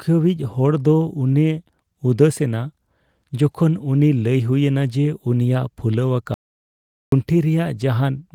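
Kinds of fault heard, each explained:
Audio dropout to silence: the input was likely lost, so silence was written from 6.34 to 7.12 s, leaving 0.78 s of dead silence with no room tone.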